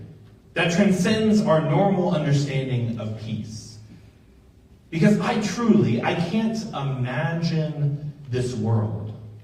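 Nothing stood out as a technical problem on listening.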